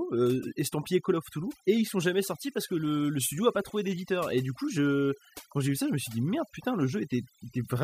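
Throughout, overdone noise removal drops the background, breaking it into twinkling specks, unlike a noise gate's whole-signal on-off pumping.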